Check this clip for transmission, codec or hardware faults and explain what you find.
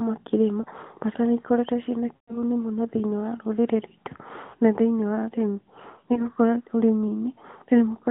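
Yes, there is one kind of transmission fault: lost AMR speech frames, occurring four times. The speech is carried over narrowband AMR, heard as a band of about 150 Hz to 3.6 kHz.

The first dropout is a brief dip at 0.62–0.65 s. The longest runs from 2.16 to 2.40 s, between "nĩikoretwo ciĩna" and "mũno thĩini wa rũrĩrĩ". Another falls at 4.50–4.55 s, before "na thĩinĩ wa ũrĩmi". The last follows those words at 6.14–6.29 s. Corrupted frames failed their check. The decoder then repeated its last good pitch and vocal tract settings at falling gain. The 2.16 s gap fits about six lost 20 ms frames, and the sound smears and fades before recovering roughly.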